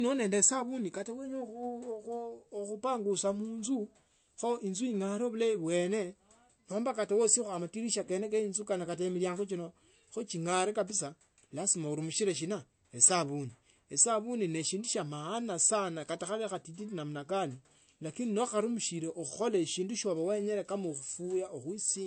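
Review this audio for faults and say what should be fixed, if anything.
Throughout the clip the speech sounds dull, with nothing above 8.3 kHz. This is likely low-bitrate audio saved at a high bitrate. The cut-off and artefacts fit an MP3 encode near 48 kbit/s that was later re-encoded around 320 kbit/s, and the second encode cannot restore the lost detail. To prevent it, encode once from the original uncompressed source rather than from an already compressed copy.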